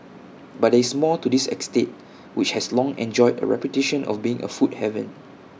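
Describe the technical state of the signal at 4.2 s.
At 4.2 s the speech signal is intact, with no dropout, distortion, glitch or other fault to be heard at that point.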